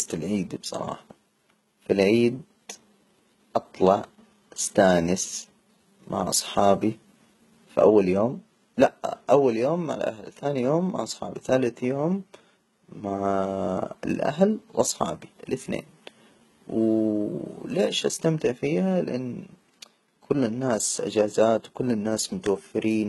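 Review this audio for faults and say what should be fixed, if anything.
HE-AAC compression runs throughout the speech. Nothing is present above 11.8 kHz, and the treble below that sounds synthetic and gritty, with lispy s sounds. The likely cause is the upper band being rebuilt from copied lower bands under a coarse envelope, and the damage is heavy, which fits a bitrate around 16 kbps. Re-encoding from the original at a much higher bitrate would prevent it.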